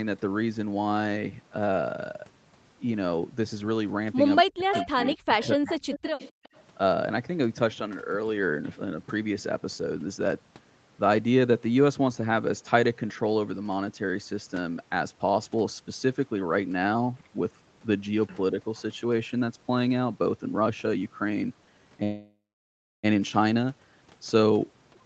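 From 4.43 to 4.98 s and again from 5.14 to 5.87 s the speech sinks by as much as about 40 dB in pieces, with roughly 0.4 s and 0.5 s affected. That is speech suppressed in double talk, likely an echo canceller turning the near talker down along with the far side it could not separate.

Overlapping these, an echo leak lets a copy of the speech return 256 ms late at 4.72 to 4.86 s, 5.04 to 5.11 s, 5.42 to 5.47 s and 5.66 to 6.62 s. It sits about 5 to 20 dB below the direct speech and is likely residue that the canceller missed. The fixed delay is what separates it from room reverberation.

At 6.31 to 6.43 s the background is gated by the echo canceller, dropping about 36 dB for around 100 ms and then returning.

From 22.03 to 23.05 s a call audio freeze stretches the last sound into a fading tail that goes silent for about 0.67 s. The audio then resumes where it stopped with nothing lost, likely because packets stalled and the jitter buffer ran dry. 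That separates it from packet loss, which removes audio.

From 24.35 s to the end, a jitter buffer speed-up plays the audio at about 116% speed, trimming roughly 150 ms in total. It sounds hurried at unchanged pitch. Throughout, the Opus call path caps the bandwidth at 8 kHz.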